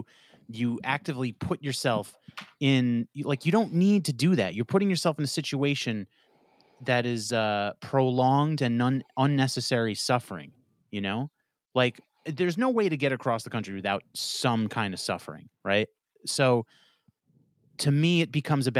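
Nothing stood out as a technical fault on listening to this speech recording.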